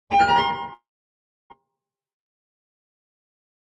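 At 0.73 s the sound smears into a brief buzzing continuation that fades within a fraction of a second, leaving near-silence until about 1.54 s, when the audio resumes with a piece of it gone. This is likely a long network dropout: packets stopped arriving, so the receiver stretched the last sound as a decaying fill before giving up. Roughly 0.6 s of the original sound never plays.

From 1.61 s to 3.66 s the audio runs slightly fast, about 6 percent quicker than normal, yet its pitch stays put, so events feel faintly hurried and crowded together. This is a jitter buffer speed-up. After the gap, the buffer was holding more audio than it wanted. The receiver caught up by cutting many tiny pitch-period slices, trimming something like 150 ms overall. Throughout, the Opus call path's upper limit near 12 kHz cuts off the top end.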